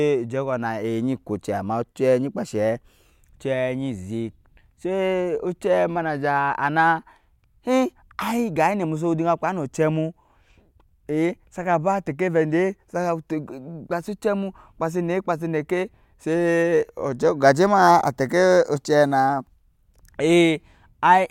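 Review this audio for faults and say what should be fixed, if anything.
Nothing here needs fixing; I couldn't hear any technical faults anywhere in the recording, so it can stay as it is.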